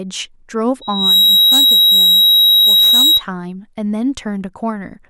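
Loudspeaker feedback squeal runs from 0.81 s to 3.23 s. A microphone is picking up the loudspeaker it feeds, and at 3.8 kHz the round trip through that loop has more than unity gain, so the tone reinforces itself on every pass. It swells from nothing within about a third of a second into a piercing whistle roughly 10 dB louder than the speech.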